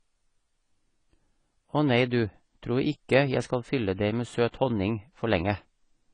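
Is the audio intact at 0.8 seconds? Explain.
No, not really. At 0.8 seconds, as everywhere else in this speech, you're hearing what is likely AAC compression. Nothing comes through above 10 kHz, and the damage is plainly audible: a dull, smeared top end with a watery, fizzy edge on sibilants. That fits AAC-LC squeezed down to something around 24 kbps. The encoder drops the cut-off and quantises the spectrum so coarsely that bands go missing or get patched with noise.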